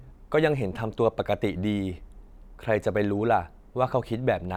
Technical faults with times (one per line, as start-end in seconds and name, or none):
none